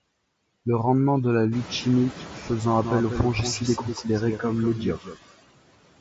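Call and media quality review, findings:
Noise suppressor artifacts, whole clip. Per-frame suppression of bands judged steady noise, pulling background down about 21 dB between phrases. Noise pumps back under speech, most audible once room noise rises near 1.5 s.

Speech cut by the noise suppressor, 4.98 to 5.17 s. Suppressor misclassified low-level speech as noise, attenuating it by up to about 15 dB for roughly 150 ms. That stretch sounds swallowed and faint. Band-limited near 7.7 kHz by the mSBC link.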